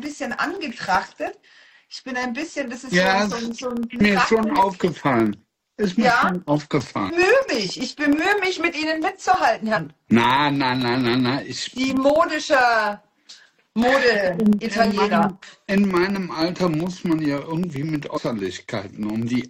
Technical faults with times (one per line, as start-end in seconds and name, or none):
0.05-19.42 periodic USB or driver dropouts
4.00 damaged data in a compressed stream
7.08 damaged data in a compressed stream
9.75-9.78 damaged data in a compressed stream
15.42 damaged data in a compressed stream
18.16-18.18 damaged data in a compressed stream